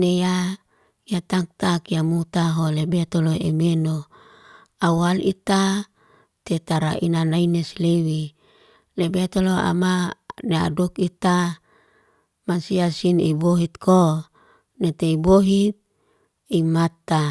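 No technical faults are audible.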